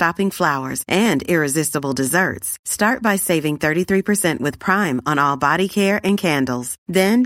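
From 1.06 s to 7.09 s a click recurs about every 1.01 s, roughly seven in all. These are likely clock drift buffer slips: two clocks disagree by a couple of hundred ppm, so the buffer between them periodically drops or repeats a handful of samples.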